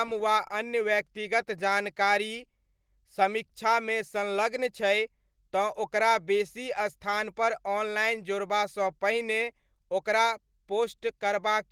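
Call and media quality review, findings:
No faults found in review.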